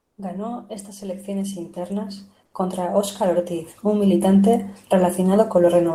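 It's a speech clip, and right after "estas elecciones internas", from 2.45 to 2.53 s, the real background drops out for about 80 ms and is replaced by comfort noise: a smoother, featureless noise roughly 5 dB quieter than the ambience around it. With the background already sitting about 48 dB below the loud parts, that short pause gets filled by synthetic noise, likely because Opus DTX stopped sending during the gap between speech.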